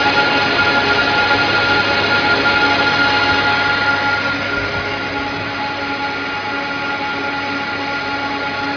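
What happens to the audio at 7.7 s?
Nothing goes wrong at 7.7 s; the audio plays through that moment intact, with no dropout, click or other fault.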